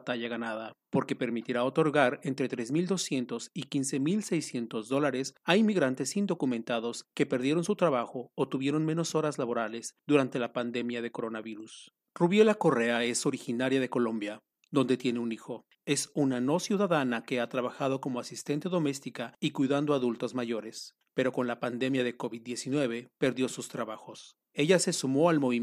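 No technical faults can be heard anywhere in this recording.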